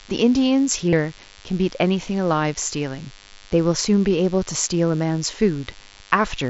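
A DECT cordless phone buzz runs through the whole speech clip, a thin, steady 100 Hz buzz rich in harmonics, sitting roughly 30 dB below the voice. A nearby DECT handset or base pulses every 10 ms, and the audio circuit rectifies those bursts. Mains hum is a smoother 50 or 60 Hz tone, while this is sharper and clicky.

From 0.89 to 0.93 s comes concealed Bluetooth headset packet loss. About 37.5 ms of audio was lost on the headset link, which fits several consecutive frames, and the receiver looped recent waveform to fill it. This gives a brief buzzy, held tone at full level with a slight warble on recovery, not a silent dropout. The mSBC wideband link can be heard carrying speech up to 8 kHz.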